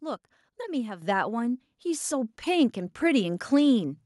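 A microphone volume step-up occurs at 1.02 s: the input gain on the microphone was raised in a single jump of about 7 dB, so the speech and the background noise beneath it both become abruptly louder together, mid-stream, rather than rising gradually.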